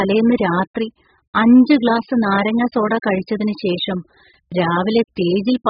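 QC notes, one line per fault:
Throughout, AAC compression: nothing remains above 5 kHz, so the speech sounds dull, and sibilants come through as a smeared, fizzy hiss that warbles rather than staying crisp. This is likely AAC-LC at a very low rate. The damage is heavy enough to suggest something near 8 kbps. Too few bits forced the encoder to discard the upper band and quantise the remaining frequency lines so coarsely that gaps and swirling texture appear.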